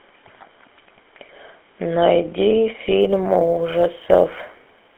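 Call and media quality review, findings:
GSM full-rate codec, whole clip: buzzy, gravelly speech confined to 300 Hz to 3.4 kHz; regular-pulse excitation damage plainly audible, fitting a 13 kbit/s coder.

Sample clock jitter, 3.01 s to end: roughness rising with loud, bright speech; unstable converter clock, error roughly 45 dB under signal, a couple of microseconds timing wobble.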